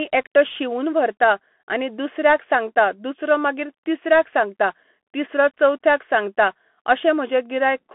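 Bluetooth CVSD headset codec throughout: one-bit delta coding, consistent with 64 kbps, cuts everything above 3.8 kHz, leaving thin speech with plainly audible granular hiss.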